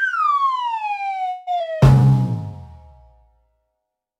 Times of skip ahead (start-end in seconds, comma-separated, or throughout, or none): 1.59-1.62